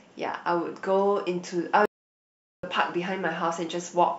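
A playback stall runs from 1.86 s to 2.63 s: the speech cuts off mid-flow and the output falls completely silent for about 0.78 s before the sound resumes. A gap this long is the signature of the output being starved. The player likely ran out of buffered data or had its audio thread blocked, leaving nothing to send until it recovered.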